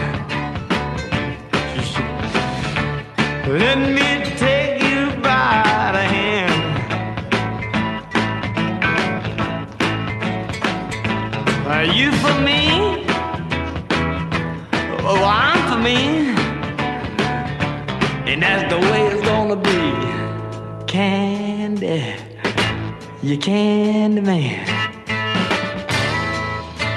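Nothing goes wrong anywhere in the clip; it simply carries the usual character of a call passed through an Opus-coded path, with the top end rolled off around 12 kHz.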